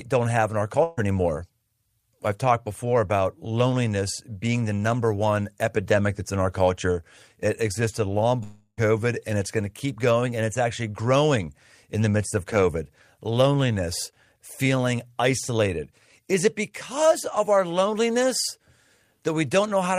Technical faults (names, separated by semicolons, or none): burst of packet loss; long network dropout